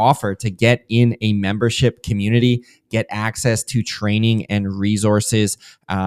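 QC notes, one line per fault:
No faults were heard in the speech recording. Nothing in it calls for a time-stamped entry.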